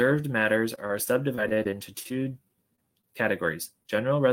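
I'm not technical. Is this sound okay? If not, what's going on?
No. From 0.75 to 2.12 s there is repeated packet loss, which gives a robotic sound. Bits of the speech kept going missing, about eleven times. Each gap was short, none over 22 ms. The receiver filled each one by stretching the previous sound. So this stretch sounds choppy, with about 140 ms of speech lost.

Overlapping that, from 1.23 to 2.46 s, there is a jitter buffer slow-down. The receiver was short of audio in reserve. To build some up, it repeated tiny pieces of sound. The speech plays at about 93% speed, with no change in pitch. Around 90 ms is added, so sounds feel drawn out.

At about 2.76 s and again at 3.87 s there is a short concealed packet loss. Each time, roughly 20 ms of speech never arrived. The gap was filled by carrying the last sound forward and blending back in. You may hear a brief smear or wobble there.

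At 3.01 to 3.05 s there is a short stall from a late packet. Nothing was lost this time. The next piece of audio simply arrived late. The receiver held the last sound for about 18 ms while it waited, then carried on from the same place.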